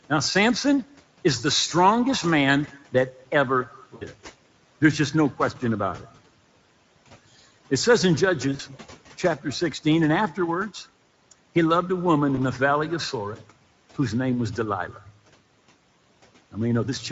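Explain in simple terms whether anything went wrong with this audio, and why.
Several things went wrong. The whole recording carries Speex codec damage: a low-rate speech compressor squeezed it, so it sounds hoarse and noisy throughout rather than only in brief spots.

From 2.67 to 2.94 s, speech was cut by the noise suppressor. It mistook some speech for background, so roughly a tenth of a second sounds swallowed and faint, with no added buzz.

VoIP packet loss concealed by the speech codec appears at 3.95 to 4.06 s, 8.55 to 8.61 s and 12.35 to 12.41 s. Pieces went missing, and the decoder filled each gap by stretching out the last bit of voice and letting it fade.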